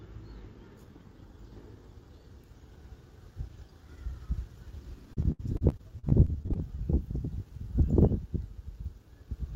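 From 5.13 to 6.60 s the sound turns choppy, with roughly a dozen short holes. The longest is about 70 ms, and about a fifth of that stretch is patched over. This is repeated packet loss (robotic sound): each lost or late piece is covered by stretching the preceding sound.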